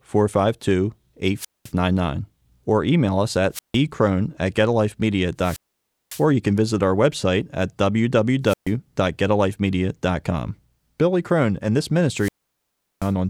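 Wireless microphone squelch dropout occurs five times, each one a short burst of rising hiss followed by a near-silent gap: at 1.36 to 1.72 s (mute about 0.21 s), at 3.52 to 3.77 s right after "or email us at" (0.16 s), at 5.39 to 6.26 s just before "you can visit our" (0.55 s), at 8.44 to 8.72 s (0.13 s), and at 12.15 to 13.13 s after "and this" (0.73 s). Each time the radio link fades, the receiver's squelch cuts the output to silence, and the speech comes back once the signal recovers.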